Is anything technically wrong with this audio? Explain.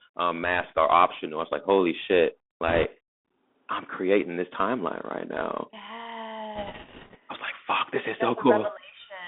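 Yes, two problems. The whole clip has been through a Bluetooth CVSD headset codec: audio squeezed into roughly 250 Hz to 3.6 kHz, with a one-bit adaptive delta coder adding grainy hiss and scratchy, distorted sibilants.

There are also bit errors on the Bluetooth voice link, from 2.68 to 2.86 s and again from 6.55 to 7.17 s. Flipped bits, a few percent in the first burst and fewer in the second, add a rushing crackle rather than sharp clicks.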